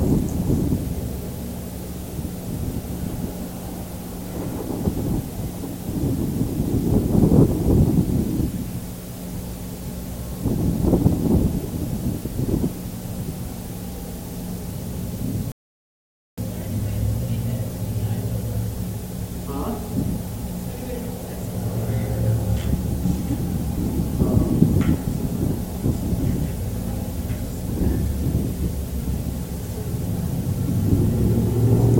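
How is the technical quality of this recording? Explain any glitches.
There is one glitch, a playback stall. From 15.52 to 16.38 s the sound cuts to silence for about 0.86 s, likely because the player ran short of data. This is one long gap, unlike the brief clicks of a dropout.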